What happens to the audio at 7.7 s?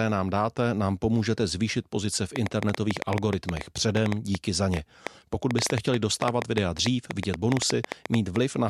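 At 7.7 s, irregular popping rises well above the speech: a train of clicks from 2.36 to 8.37 s, starting after "pomůžete zvýšit pozice v", likely from electrical interference injecting pulses.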